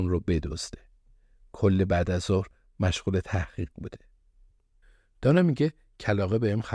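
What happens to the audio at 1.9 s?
Nothing goes wrong at 1.9 s: the speech runs on intact through that moment, with no dropout, click or other fault.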